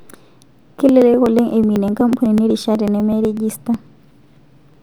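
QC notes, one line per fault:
0.15–4.74 s, periodic USB or driver dropouts: the audio path stalls every 0.124 s, skipping about a millisecond of speech, heard as regular ticks.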